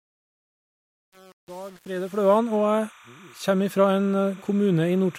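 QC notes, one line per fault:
throughout: timecode bleed, a steady chirping warble roughly 30 dB under the speech, flipping between tones near 1 kHz and 2 kHz at a 29.97 fps code rate.
0.00–2.38 s: truncation distortion on a fade, where the quiet end of the fade sounds gritty, stair-stepped like a gain stage keeping only about 7 bits, undithered.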